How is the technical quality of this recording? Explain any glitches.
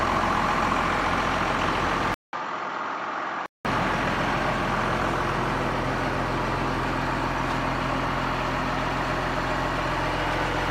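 The recording has one clear glitch, a brief input switch to a poorer device. From 2.14 s to 3.65 s the capture likely jumped to a lesser microphone or a headset profile, then returned. The switch opens with a gap of about 0.19 s of silence. On that device nothing passes above 7.5 kHz, so the sound turns dull and boxy, drops a few dB in level, and carries a faint new noise floor roughly 40 dB down, until the fuller original tone comes back.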